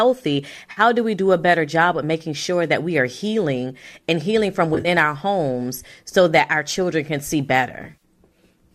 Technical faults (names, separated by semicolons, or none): AAC frame loss with concealment